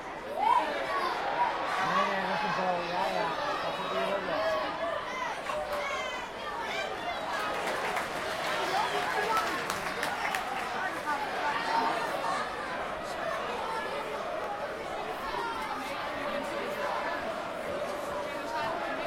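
Bluetooth stutter appears twice, at 14.44–14.47 s and again at 18.64–18.68 s. Each time a packet of audio failed to arrive on schedule, so the receiver filled the gap by replaying the slice it already held, about 21 ms long, which fits a single lost frame. The result is a brief doubled blip or catch in the sound, after which playback picks up further along, skipping what the missing packet carried.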